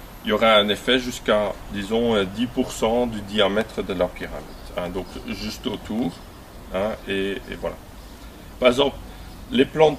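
Periodic USB or driver dropouts occur from 3.61 s to 6.11 s: something stalls the USB link or audio driver every 0.125 s, eight times a second, and each stall loses about a millisecond of audio, which is replaced by silence. Over those two and a half seconds that makes around twenty tiny gaps, heard as a steady train of ticks riding on the sound and audible only where there is signal to interrupt.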